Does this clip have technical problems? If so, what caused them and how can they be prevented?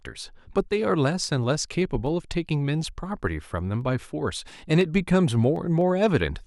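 Yes, there are periodic USB or driver dropouts: ticks every 0.25 s from 0.07 to 6.31 s, around thirty in all, each a tiny fraction of a millisecond of audio simply skipped as something stalls the bus or driver. Moving the interface off shared hubs and killing polling background tasks should stop it.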